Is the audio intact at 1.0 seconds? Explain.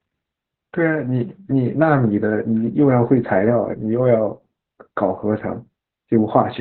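No. At 1.0 seconds, as throughout the whole clip, the speech carries Opus voice compression. The codec's SILK linear-prediction mode has narrowed the band to narrowband, so nothing above about 4.1 kHz survives, and the excitation is coded coarsely, which fits a bitrate around 8 kbps. The voice sounds muffled, hoarse and faintly robotic. A spectrogram shows a hard ceiling near 4.1 kHz with empty space above it, and smeared, blocky harmonics below.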